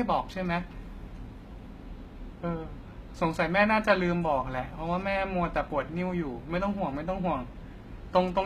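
From start to finish the speech carries plainly audible codec damage, and it's likely HE-AAC compression at work. The top end is there, but it's synthetic: the encoder keeps only the lower spectrum and patches the treble back in by copying lower bands upward under a rough envelope. Since those copied harmonics don't line up with the real ones, the s sounds come out gritty and lispy. Nothing reaches above about 14.9 kHz, and the heaviness of the artefacts fits a very low bitrate of around 20 kbps.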